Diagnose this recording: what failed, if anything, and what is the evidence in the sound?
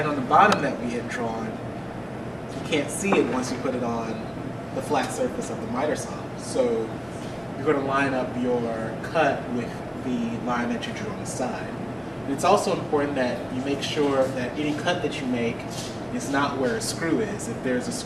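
Nothing in this recording points to a failure at any stage of the chain, from the wiring and converter through to storage and playback. There is no event in the sound that calls for a diagnosis.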